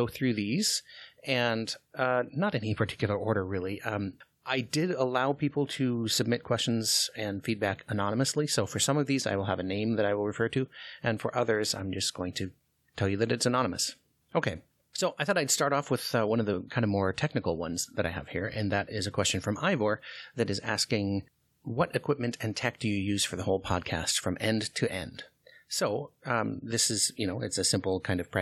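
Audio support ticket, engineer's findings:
No faults found in this recording. Nothing to trace to any component.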